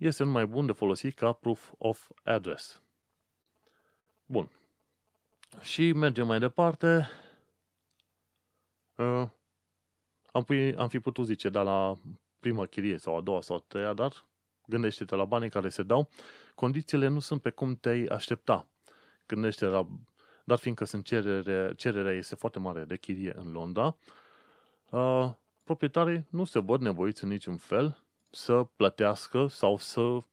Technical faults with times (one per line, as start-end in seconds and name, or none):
2.73-5.86 scattered short gaps
4.83-7.76 jitter buffer slow-down
9.59-11.66 jitter buffer speed-up
17.77-20.12 jitter buffer slow-down
22.33-24.79 jitter buffer speed-up